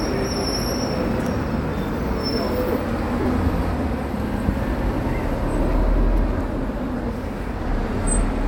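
It's a clip of sounds with one dropout: lost LE Audio frames at about 3.21 to 3.25 s. For roughly 40 ms the sound turns into a grainy, smeared wash instead of the real detail, which fits four 10 ms LC3 frames going missing over the Bluetooth link. The LC3 decoder papered over the gap by repeating the last spectrum it had with scrambled signs, so you get a noisy stand-in for what was there, and then the proper audio picks back up.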